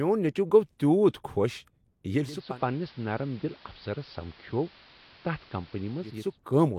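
At 2.22 s the speech shifts as digital radio blending to analogue takes hold. The receiver has lost its digital stream and cross-fades over about 400 ms to the station's AM broadcast. The treble falls away, so the sound turns dull and boxy. The level drops by about 3 dB. A steady hiss rises, sitting well below the speech. At 6.39 s the receiver blends back to digital, and full bandwidth returns.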